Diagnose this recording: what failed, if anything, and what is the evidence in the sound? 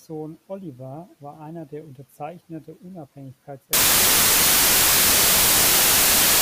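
The failure is at the sample-format conversion stage: from 3.73 s to the end of the speech, the samples are built from the wrong bytes. Each value is assembled with its bytes misaligned or swapped, so the rapidly varying low-order bits land in the most significant position. The result is loud, harsh broadband noise, close to white on the louder sounds. This separates it from clipping or added hiss, which leave the speech audible, and from a dropout, which leaves silence.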